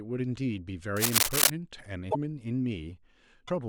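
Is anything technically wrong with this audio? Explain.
Yes, there are two kinds of fault in this speech clip.

From 0.96 to 1.51 s there is cable scratch noise: dense, ragged rustling roughly 10 dB above the speech, likely from a worn connector whose contact resistance is jumping. On a spectrogram it shows as broadband vertical streaks.

At 2.10 to 2.15 s and 3.47 to 3.50 s there are broken MP3 bit reservoir glitches. The audio jumps ahead into a brief chirp, burst of noise or short hole, likely because frames were lost and the next frames decoded borrowed bytes. The waveform shows a short discontinuity matching roughly one or two 24 ms frames.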